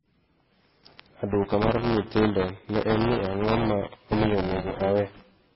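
From the start the speech sounds watery and swirly, with nothing above 5.6 kHz, likely heavy MP3 compression at a very low bitrate, somewhere near 19 kbps. At 1.28 s buffer tearing kicks in and runs to the end: a steady 200 Hz robotic buzz, as about a fifth of each buffer replays audio roughly 10 ms stale.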